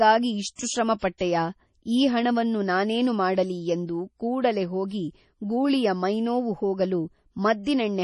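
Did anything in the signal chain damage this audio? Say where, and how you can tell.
Yes, the codec stage. The whole speech clip has nothing above 11.3 kHz, with a watery, swirly quality and smeared attacks. That's likely heavy MP3 compression, consistent with a starved bitrate around 32 kbps, where the encoder chops treble and lets weak components flicker.

There's also pre-echo from that same codec: a short hiss arriving just before sharp onsets at 0.55–0.59 s, 0.99–1.02 s and 1.18–1.20 s, each about 30–37 ms. Quantisation noise spread across the transform block leaks into the quiet gap ahead of each attack.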